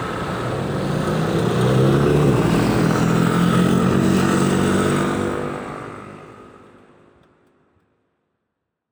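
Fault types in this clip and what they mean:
No faults are audible in this sound clip.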